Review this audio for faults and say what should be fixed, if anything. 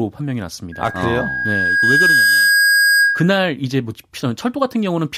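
A microphone-to-loudspeaker loop exceeds unity gain, causing loudspeaker feedback squeal: a 1.6 kHz tone swells over about a second and a half from 0.72 s to 3.40 s, peaking roughly 5 dB above the speech. Lower the gain, move the microphone away from the loudspeaker, or notch out 1.6 kHz.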